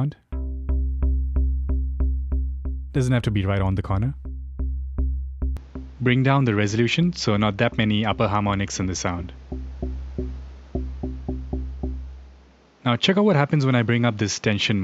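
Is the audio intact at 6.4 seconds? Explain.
No, at 6.4 s the sound has already turned duller. From 5.57 s to the end, it likely switched input to a poorer device, with no gap. Nothing comes through above 7.6 kHz, and a faint new background noise appears while the level stays about the same.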